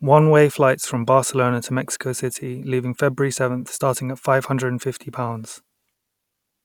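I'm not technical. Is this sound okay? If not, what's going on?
Yes, nothing wrong can be heard in this recording.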